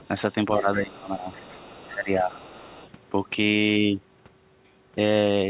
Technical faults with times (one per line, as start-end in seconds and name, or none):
0.00-0.08 other side's voice leaking through
0.58-1.28 speech suppressed in double talk
1.04-1.93 other side's voice leaking through
1.88-2.34 speech suppressed in double talk
2.21-2.90 other side's voice leaking through